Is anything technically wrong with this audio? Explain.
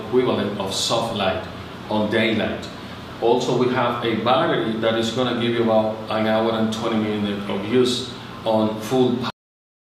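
Yes, the clip has a cut-off end. At 9.3 s the sound stops mid-event and drops straight to digital silence for the remaining 0.6 s or so, because the final buffers were never written. Unlike a fade-out or natural ending, there is no decay or tail.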